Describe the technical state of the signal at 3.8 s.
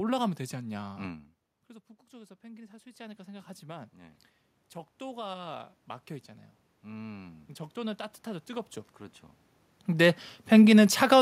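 At 3.8 s the signal is partway through an automatic gain rising event that runs from 2.09 to 4.27 s. The input level had dropped by about 19 dB, so the automatic gain control responded by increasing its gain gradually, by about 8 dB in total. Because the gain is applied to the whole microphone signal, the speech and the room noise behind it swell upward together across those two seconds.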